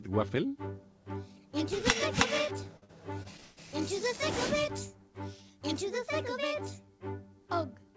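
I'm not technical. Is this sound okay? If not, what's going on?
No, there's a problem. Between about 2.64 and 3.59 s you get repeated stalls (stutter): the audio kept arriving late over a call connection, so it ran dry six times. Each pause was bridged by stretching the last sound, the longest 165 ms, so nothing's lost but it drags and jerks.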